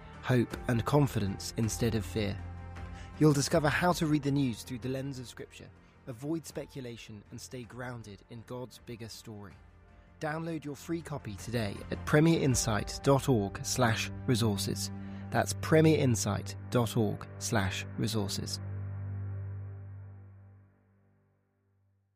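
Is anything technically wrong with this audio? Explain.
Yes. Zipper noise runs from 3.96 to 5.46 s. The level drops by roughly 10 dB in unsmoothed 3 dB steps, about three a second. Each step jumps the waveform and leaves a small click, so audible ticking rides the falling sound.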